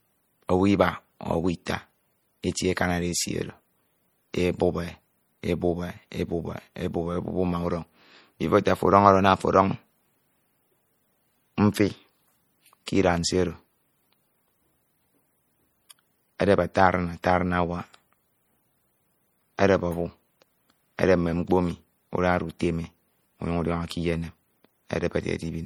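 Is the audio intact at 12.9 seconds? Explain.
No. At 12.86 s a pre-echo occurs. The codec spreads quantisation noise across a whole transform block, and when a sharp attack lands late in that block, noise sized for the loud onset also fills the quiet instant before it. The result is a brief smear of hiss about 15 ms ahead of the attack, which arrives softened rather than crisp.

That moment also sits inside MP3 compression damage that runs through the whole speech clip. The coarse, plainly audible artefacts fit a low bitrate of around 48 kbps, the likely cause. Starved of bits, the encoder zeroes weak frequency lines that flicker on and off between frames, giving a watery, swirly texture with metallic chirps on s sounds and blurred onsets. The top end still extends to about 21 kHz.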